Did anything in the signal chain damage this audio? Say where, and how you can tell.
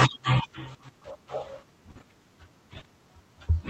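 Yes: at the network stage, short concealed packet loss at 1.91–1.97 s and 2.79–2.83 s. Late packets were patched by extending the preceding sound, leaving brief smears.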